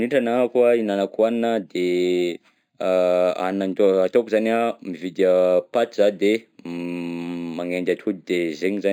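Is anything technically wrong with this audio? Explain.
Yes. Throughout the speech there is imaging from linear upsampling. Straight-line interpolation from 11 to 48 kHz leaves a mirrored copy of the spectrum between 5.5 and 11 kHz, about 35 dB down. It adds a faint metallic shimmer to sibilants above a dulled top. Unlike aliasing, this shimmer mirrors above the original band rather than folding back into it.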